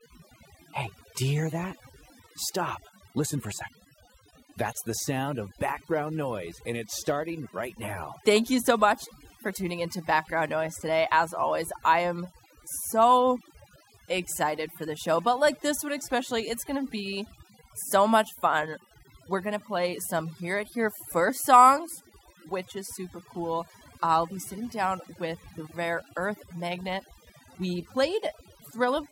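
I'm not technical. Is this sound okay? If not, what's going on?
No, it's had overdone noise removal the whole way through: the cleanup wiped out the background noise and quiet bits of speech together, leaving the background broken up into twinkly specks.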